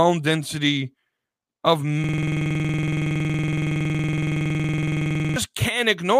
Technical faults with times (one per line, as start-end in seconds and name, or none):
2.04-5.36 system hang loop